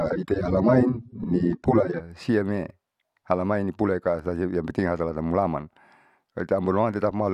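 For the first 2.0 s, the adaptive stream is starting at a low bitrate. The treble is dull and artefacts are stronger, fitting about 24 kbit/s, then quality jumps cleanly.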